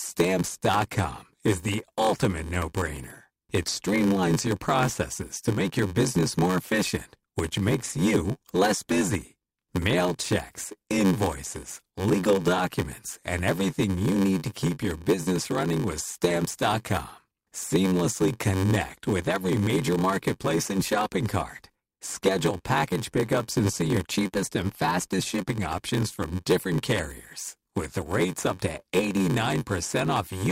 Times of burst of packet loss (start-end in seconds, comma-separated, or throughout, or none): none